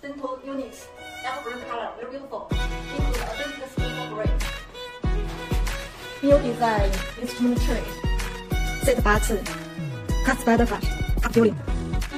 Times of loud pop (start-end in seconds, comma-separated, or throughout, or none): none